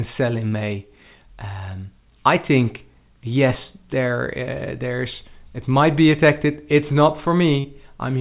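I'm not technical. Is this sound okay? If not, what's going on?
No. Twice in this speech, near 0.48 to 0.55 s and again near 7.60 to 7.67 s, there is a quick smear or wobble lasting a few hundredths of a second. That is short concealed packet loss: about 40 ms of the call arrived too late to be played, so the receiving end patched the gap by stretching the sound just before it, then blended back into the real audio. The call line itself carries nothing above 4 kHz, so the sound is a little dull.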